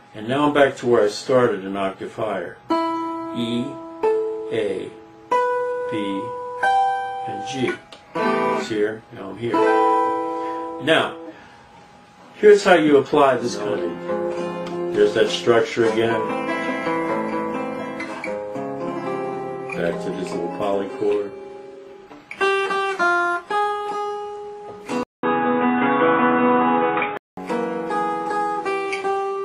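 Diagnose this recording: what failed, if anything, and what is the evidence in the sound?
At 25.03 s the audio drops out for 200 ms, then returns dull and boxy with nothing above 3.8 kHz, a level shift of about 5 dB and a new, faint noise floor until 27.37 s. This points to the input likely switching to a poorer device at the driver stage. A codec bandwidth drop would not bring the gap, the new noise or the level change.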